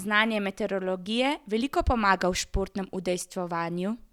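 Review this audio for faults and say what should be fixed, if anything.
An analogue FM radio link faded as reflected signals cancelled, causing a wireless microphone noise hit from 2.35 to 2.43 s, just after "znanje meteorologije veliko pomaga": receiver noise surged into a brief burst of static. Use diversity receivers and keep clear line-of-sight between transmitter and antennas.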